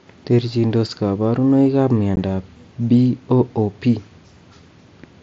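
At 2.16 s, a short stretch of voice data between the headset and the phone failed to arrive, and nothing filled the gap: unconcealed Bluetooth headset packet loss. About 15 ms of speech is missing, which fits two lost packets on the mSBC link, and silence or an idle pattern simply takes its place. The result is a brief hole in the speech with hard edges before the wideband headset sound resumes.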